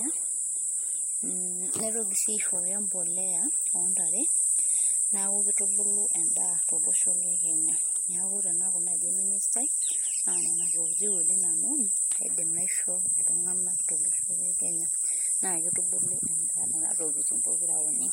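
Speech recording with no audible technical faults anywhere.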